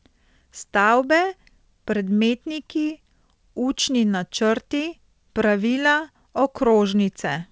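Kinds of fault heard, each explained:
Clock drift between sender and receiver: The sound has a faint, uneven unsteadiness in pacing from start to finish, with small hiccups instead of a smooth flow. The sender's clock runs about one and a half percent slow against the receiver's, so the jitter buffer keeps draining and must be refilled.
Repeated timing corrections: From 0.66 s to 7.39 s the pacing drags slightly, running at 98% speed, with brief stutters at uneven intervals. The receiver repeats short pieces to keep up with the slow sender, lengthening the passage by roughly a tenth of a second overall.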